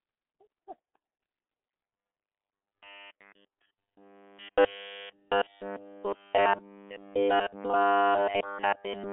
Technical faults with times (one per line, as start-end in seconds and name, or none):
0.00-9.12 G.723.1 codec
1.83-9.12 robotic sound from repeated short buffers